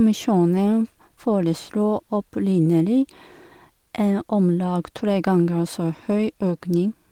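Listening to this speech recording, nothing stood out as a technical problem at any point.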